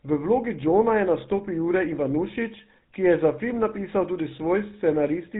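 Speech runs through the GSM full-rate codec from start to finish, and the damage is plainly audible, with a bitrate consistent with the 13 kbps full-rate mode. The codec models the vocal tract and drives it with sparse, regularly spaced pulses, so the voice takes on a buzzy, gravelly roughness, and nothing survives above 4 kHz. That grit sets it apart from a simple telephone band-limit filter, which muffles the voice without adding texture.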